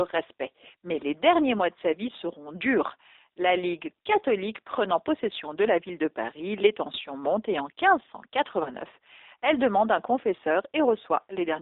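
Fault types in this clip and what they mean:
G.729 codec: Throughout the clip, the speech is carried by a low-rate CELP codec that sends only a vocal tract filter, a pitch predictor and a sparse pulse pattern per frame, which fits G.729A at 8 kbit/s. The line band runs from about 300 Hz to 3.7 kHz, so the speech sounds thin and boxy, and the model-based rebuilding leaves a plainly audible rough, synthetic grain on every syllable.
VoIP packet loss concealed by the speech codec: From 8.63 to 8.72 s, about 30 ms of audio goes missing, which points to a single lost packet. The decoder fills the gap by repeating its last pitch and filter settings at falling gain, so the speech smears into a brief buzzy tone or coloured noise that fades. Because each frame builds on the previous one, the speech stays weak or distorted for tens of milliseconds or more after about 8.72 s.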